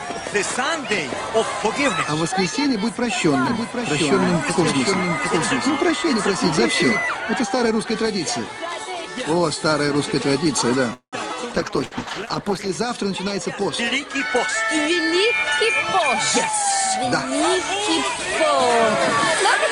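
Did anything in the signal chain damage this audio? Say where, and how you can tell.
Yes. From 3.46 to 7.00 s the audio is heard twice: a full-band second copy sits about 5 dB below the original and trails it by roughly 0.7 s, with no reverb or tonal colouring, and it appears and disappears abruptly at those boundaries. That is a doubled audio track. The likely cause is a second, slower capture path in the driver/buffer stage or an edit in storage that left two out-of-step copies mixed together.

At 10.93 s the sound stalls. The last fragment is stretched into a fading held tone, which drops to about 100 ms of silence. At 11.16 s the audio picks up exactly where it left off, with nothing skipped, but now runs 192 ms later. This is a call audio freeze. Its likely cause is packets delayed in the network, so the jitter buffer emptied and the receiver's concealment filled the wait.

From 11.58 to 12.81 s the sound turns coarse and dull, losing its top end, and it stays at its worst for about 1.11 s before clearing. 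This is a call bitrate drop at the codec stage. The encoder was pushed from 48 kbps down to 12 kbps after the bandwidth estimate fell, so it quantised more roughly and band-limited the signal.

Inside that degraded stretch, at 11.85 to 11.94 s, a short burst of packet loss occurs. The receiver holds the preceding sound for about 65 ms, fading it out as a buzz or hiss, and then jumps ahead. About 60 ms of audio never arrives. The packets were lost or arrived too late in the network, and concealment covered the gap.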